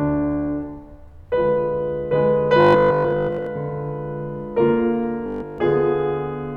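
Audio data likely arrived too seldom in this music clip, so the last 20 ms kept repeating. That produces robotic sound from repeated short buffers, a rigid 50 Hz buzz, from 2.61 to 3.47 s (mostly repeats) and 5.26 to 5.58 s (entirely repeats).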